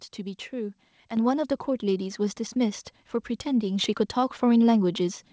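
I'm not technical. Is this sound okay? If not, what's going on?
No. At 1.17 seconds the microphone volume steps up: the voice and the room noise behind it get louder together in one instant. That is the software turning the microphone up, not someone speaking louder.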